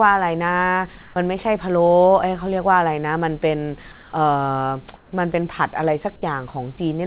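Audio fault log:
1.02–1.16 s, 3.92–4.12 s and 4.96–5.12 s, comfort noise in place of the background: in each of these short pauses, lasting 140, 200 and 160 ms, the quiet room tone (about 26–28 dB below the loud parts) turns into a flat, featureless hiss. It holds its level in the first gap and dips by about 1 dB and about 3 dB in the second and third. The likely cause is discontinuous transmission, with the receiver filling each silence with synthetic noise. The band stays capped at 4 kHz throughout, as you'd expect from a narrowband call codec.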